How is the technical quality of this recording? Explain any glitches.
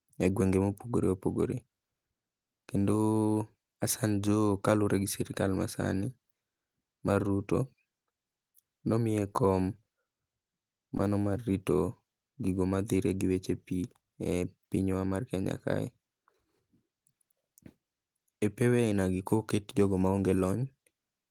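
There's one glitch worth flagging: a short concealed packet loss at about 10.97 to 11.01 s. A sliver of the call, about 20 ms, never made it to the decoder in time, so the receiver patched roughly 14 ms of it by carrying the preceding sound forward and then blending back into the real speech. You hear it as a quick smear or wobble, and anything very short at that spot may simply drop out.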